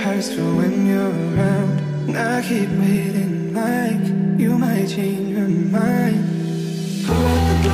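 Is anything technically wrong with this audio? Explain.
Yes. From 1.01 s to 7.68 s there is a regular click, repeating every 1.33 s, about seven times in all. This pattern is likely clock drift buffer slips. Two devices seem to run on separate clocks that disagree by roughly 150 parts per million. The buffer between them slowly drifts full or empty. Each time it overflows or runs dry, a small block of samples, around seven, is dropped or repeated. That sudden jump in the waveform is the short click.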